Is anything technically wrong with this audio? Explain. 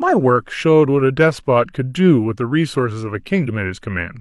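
No, nothing technically wrong jumps out here; this bit of speech comes across just fine with no glitches to point to.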